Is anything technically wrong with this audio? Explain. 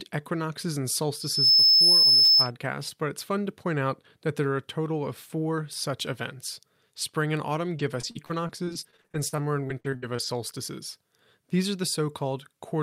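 Yes, two faults.

From 1.19 to 2.51 s, between "equinoxes and" and "but it's fun to", there is loudspeaker feedback squeal. The microphone re-amplifies its own loudspeaker, and the loop gain exceeds unity at 5.2 kHz. That tone swells over roughly a third of a second to about 10 dB above the speech.

From 7.49 to 10.24 s there is repeated packet loss, giving a robotic sound. There are 20 gaps totalling about 520 ms, the longest 60 ms. Each hole is concealed by extending the preceding audio, about 18% of the span, so the speech comes out choppy and mechanical.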